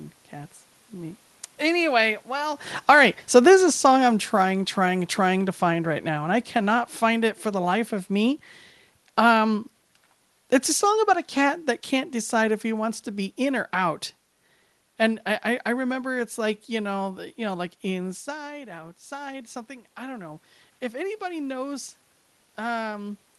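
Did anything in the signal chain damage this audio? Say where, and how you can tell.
Yes. Automatic gain falling in call processing: from 1.62 s to 15.93 s the level sinks by about 12 dB. The room noise drops with it, which rules out a talker simply leaning back.

Automatic gain rising, in the same stage: from 17.03 s to 23.24 s voice and background swell together by about 6 dB. This slow gain ramp lifts everything, unlike a talker moving closer.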